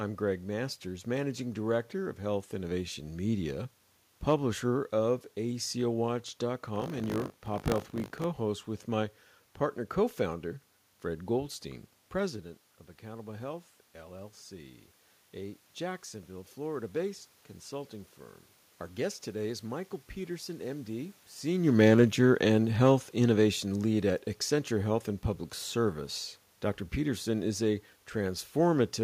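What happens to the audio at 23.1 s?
Automatic gain falling: from 21.47 to 26.02 s the gain control judges the input too loud or its background noise too strong and steadily turns its gain down by about 4 dB. The speech and the room noise behind it sink together, so the whole sound gradually dims.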